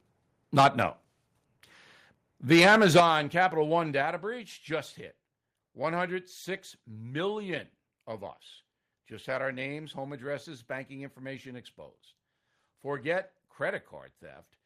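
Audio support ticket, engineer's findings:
Microphone overload, 0.58 to 0.83 s and 2.51 to 3.0 s: harsh crackle on loudest syllables, peaks pushed about 10 dB and about 8 dB past the converter's limit. Likely mic input gain set too high for the converter. Waveform shows flat-topped peaks, denser in the second burst. Spectrogram shows broadband splatter above the harmonics.

Microphone volume stepped down at 0.6 s (about 2 dB), 3.0 s (about 9 dB), and 4.02 s (about 4 dB, just before "breach just hit"): abrupt level drops in voice and background together. Likely the call software cutting device input gain after loud or clipped input. Waveform shows a sudden envelope step. Spectrogram shows uniform darkening at each step.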